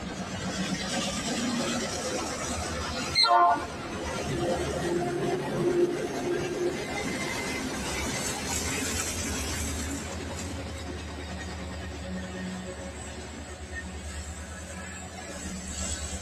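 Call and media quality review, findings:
Noise suppressor applied to music or sounds, whole clip. Speech-tuned suppressor left active on non-speech audio. Treats sustained tones, ambience and tails as noise. Attacks pass, held material sinks. Level swings around 5 dB, giving audible pumping and thinning.

Sound cut by the noise suppressor, 10.6 to 13.67 s. Same suppressor misclassifies this passage as noise. Drops it about 4 dB below surrounding material. Around two seconds affected in total. Sustained and decaying content sinks, transients mostly survive.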